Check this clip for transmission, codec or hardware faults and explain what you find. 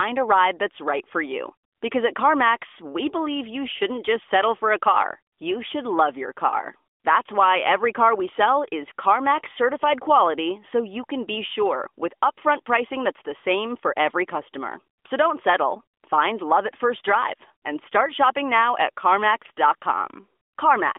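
No transmission, codec or hardware faults.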